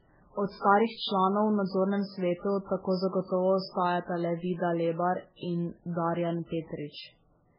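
Transcoding between lossy codecs affects the speech for the whole clip. The cause is likely a very low-bitrate MP3 encode, around 8 kbit/s, later re-encoded with Vorbis at roughly 20 kbit/s. Nothing is heard above about 5.3 kHz, so sibilants sound dull and muffled. The second encoder spends its small budget reproducing the first one's smearing and warble while adding its own swirly, metallic texture, so both kinds of damage are layered together.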